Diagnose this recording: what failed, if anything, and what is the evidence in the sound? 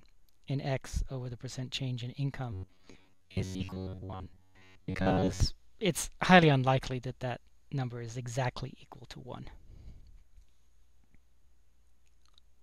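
The fault most likely sits at the driver or buffer stage: new audio arrived too seldom, so the playback path kept replaying its last short buffer while fresh audio was skipped. From 2.53 to 5.40 s this produces robotic sound from repeated short buffers, a rigid, metallic buzz at about 94 Hz. A repeat period near 10.7 ms matches that buzz, and most of that stretch is repeated material rather than new audio.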